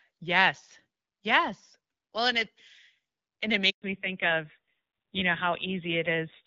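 A speech clip that starts out on a wideband call, with the clean, slightly processed character of HD Voice at a rate that fits around 12.65 kbit/s. Right after "and it", at 3.70 s, there's a handover gap: the phone switches networks, no speech frames arrive during the move, and the voice dies away and is silent for about 120 ms, until 3.82 s. Whatever was said in that stretch is just gone. From 3.82 s to the end there's a fallback to narrowband. The call drops off the wideband codec onto an older narrowband one, and the sound fits roughly 7.4 kbit/s AMR-NB. Nothing above 4 kHz survives, so the voice turns duller and rougher.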